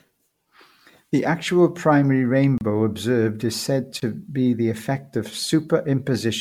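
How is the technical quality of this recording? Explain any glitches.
The technical quality is poor. The speech has a smeared, swirly, hollow character throughout, and two brief dropouts interrupt it.

Generation loss is present throughout. Attacks blur and the tone sounds hollow. This is likely from about five rounds of MP3 re-encoding, which fits roughly 96 kbit/s, with nothing above 19.9 kHz.

There are two blocks of digital silence, at 2.58–2.61 s (30 ms) and 4.00–4.02 s (20 ms). Each is a short hole, where the sound cut out abruptly with no fade.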